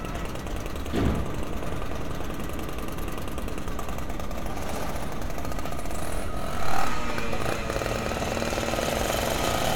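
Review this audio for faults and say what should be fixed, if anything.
Nothing needs fixing: the audio has no technical faults to be heard anywhere in it.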